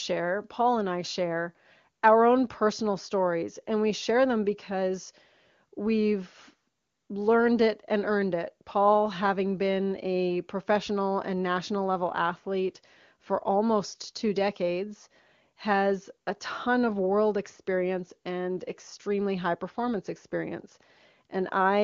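No technical faults are audible.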